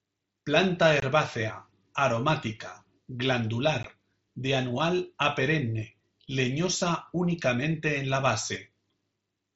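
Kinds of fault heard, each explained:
Unconcealed Bluetooth headset packet loss, 1.00 s and 3.83 s: lost packets leave abrupt silent holes, 23 and 15 ms, the latter before "de anual a perenne".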